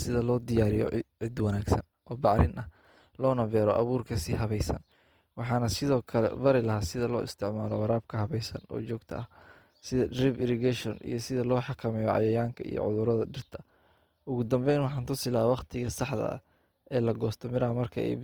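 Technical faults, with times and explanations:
Throughout, Opus compression: the speech has a rough, grainy texture. Tonal parts of the voice break into a noisy fizz instead of staying clean, while the full top end is kept, with content reaching about 20.2 kHz. This likely comes from Opus in its CELT music mode at a low rate, around 24 kbps. The encoder preserves each band's energy but fills starved bands with folded or noise-like content, so detail turns granular while leaving few holes.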